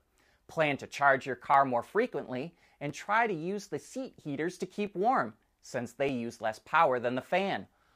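Speech with five sharp clicks at 1.54, 2.89, 4.87, 6.09 and 7.22 s, each a thin vertical spectrogram line, likely dropped samples losing under a millisecond each.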